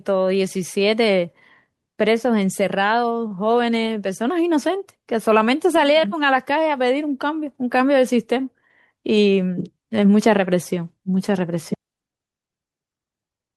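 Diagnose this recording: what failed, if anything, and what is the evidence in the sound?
At the network stage, one packet arrived late and the receiver's jitter buffer ran dry, producing a short stall from a late packet between 3.27 and 3.33 s. To cover the gap, the receiver extended the last speech sound by about 33 ms, then resumed exactly where it had paused, so no speech is lost. The held sound is audible as a brief unnatural sustain with a faint buzz or dip, and everything after it plays 33 ms later than before.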